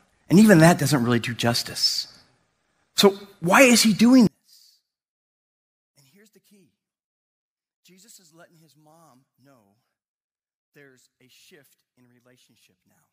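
A speech recording that collapses from 4.27 s, right after "why is he doing", to the end: the level falls by about 37 dB, most likely one channel inverted cancelling the centred voice in a mono sum. Unlike a dropout, a faint residue remains rather than silence.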